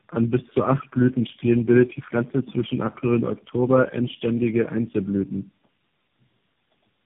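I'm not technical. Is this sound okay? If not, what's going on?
No. From start to finish the speech sounds rough, muffled and warbly, with nothing above about 3.6 kHz. This is tandem speech coding: the call was squeezed and unsqueezed by four phone-network speech coders in a row, each adding damage.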